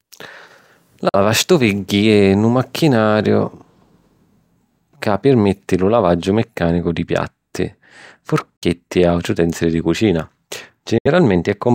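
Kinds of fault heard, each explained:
Bluetooth dropout: packets likely reached the headphones too late and were dropped, leaving three silent gaps of 46 to 70 ms before speech resumes mid-flow.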